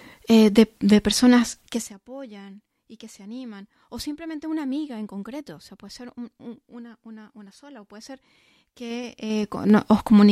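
Right after "eh de de personas", at 1.6 s, the level drops by roughly 20 dB in 3 dB jumps that finish by 1.96 s. That's zipper noise: the gain moves in coarse unsmoothed steps, about twenty a second here, and each jump clicks. The same thing runs the other way from 8.84 s to 9.8 s, stepping back up around 20 dB, more slowly this time at around seven ticks a second, so the zipping sounds sparser.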